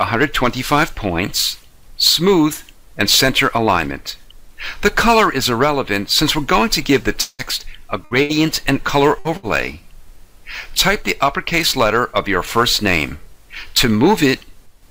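At 7.21 s the audio stops advancing. For about 170 ms the last sound carries on as a fading buzz or hiss, then about 20 ms of silence follows before the audio returns at 7.42 s, with about 180 ms of material gone. This is likely a long network dropout. What sets it apart from the shorter losses is that the continued sound fades completely into silence before anything resumes. The later gaps are bursts of packet loss, at 8.05 to 8.14 s, 8.23 to 8.32 s, 9.19 to 9.28 s and 9.37 to 9.46 s. Each one drops about 60 ms of audio and bridges it with roughly 56 to 65 ms of continued, decaying sound: a held buzz on voiced material and a fading hiss on other sounds. None of these reaches silence, and the audio picks up again further on. They come in close pairs about 90 ms apart, which gives a stuttering texture rather than a single hole.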